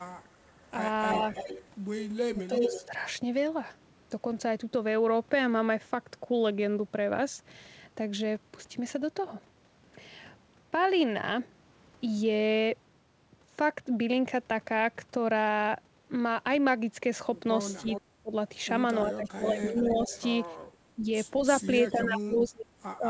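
Echo leak, 0.53 to 2.86 s: a second copy of the speech follows the original about 328 ms behind, at roughly the same loudness, so the two overlap and smear. The likely cause is a far end playing the call on a loudspeaker whose echo canceller failed to subtract what its microphone picked up, sending that residue back down the line.

Speech suppressed in double talk, 2.29 to 2.92 s: while the echo is still sounding, the main speech dips by up to about 15 dB, with roughly 0.4 s affected in total. This is likely an echo canceller that could not tell its local talker from the returning echo and pulled down both at once.

Echo leak, 17.69 to 18.0 s: the delayed copy returns about 350 ms late and about 10 dB below the speech. This is likely the same uncancelled loudspeaker pickup.

Speech suppressed in double talk, 17.82 s to the end: the speech is repeatedly attenuated, at its deepest by about 35 dB, so it thins and drops in pieces. 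This is likely the canceller clamping down during overlapping talk.

Echo leak, 19.24 to 20.21 s: the echo arrives about 353 ms behind and is fainter, about 20 dB down. This is likely residual loudspeaker pickup.

Background gated by the echo canceller, 20.58 to 20.68 s: for about 100 ms the room sound ducks by about 11 dB, then comes back. The canceller clamped the microphone hard while its loudspeaker was playing and released it shortly after.

Echo leak, 21.63 to 22.49 s: a faint copy sits about 356 ms behind the speech, about 20 dB down. This is likely the same leak. Throughout, the band stops at 8 kHz, consistent with a wideband call codec such as G.722.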